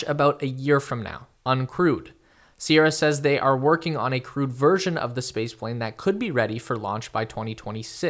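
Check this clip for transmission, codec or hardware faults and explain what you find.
No faults can be heard anywhere in this speech recording. Nothing in the sound calls for further explanation.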